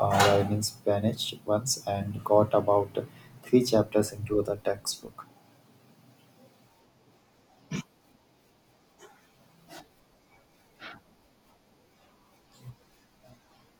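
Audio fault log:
1.48 s, 4.45 s, 11.63 s: dropped buffer (overrun). The speech jumps forward with no silence, losing about 5 ms at 1.48 s and 11.63 s and about 10 ms at 4.45 s. Likely input overwritten before being read, splicing the remaining audio together.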